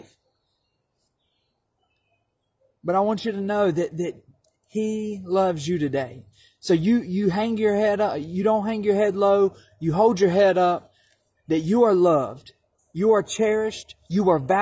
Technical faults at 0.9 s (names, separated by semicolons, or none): none